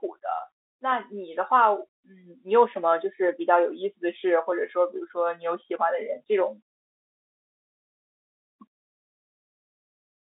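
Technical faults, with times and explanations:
No technical faults are audible in this telephone-band speech.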